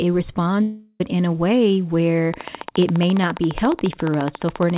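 In this speech clip, from 0.62 to 1.01 s the sound smears into a fading buzz, then returns at "in a way where" with that stretch missing, likely a long network dropout that the receiver papered over. From 2.34 s to the end, a regular train of clicks ticks about 14 times a second, peaking about 10 dB above the speech, likely interference or a faulty connection. The audio also stops at 4 kHz, which fits a narrowband call codec.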